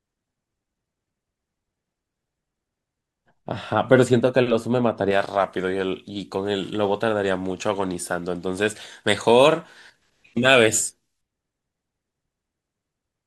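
Speech, and from 5.11 to 11.21 s pre-emphasis is left on: a treble boost was never undone by its matching de-emphasis, which fits a J.17 curve. The top end sits about 11 dB above 1 kHz at 10 kHz, sounding thin and sibilant, with a visibly brighter upper band on a spectrogram.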